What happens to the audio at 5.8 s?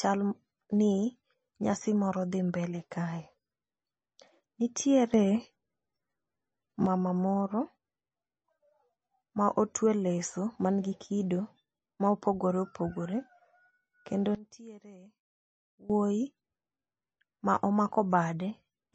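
At 5.8 s the clip is inside a sudden gain jump that runs from 5.14 s to 6.86 s. The speech and its background noise step up together by about 6 dB with no ramp and drop back at 6.86 s, most likely because a digital gain change was applied from one sample to the next.

The same moment carries the MP3 compression present throughout. The watery, swirly texture and the absence of anything above 8.3 kHz fit a bitrate near 24 kbps. This is likely the result of an encoder short of bits zeroing weak frequency lines that flicker between frames, which smears attacks and chirps on s sounds.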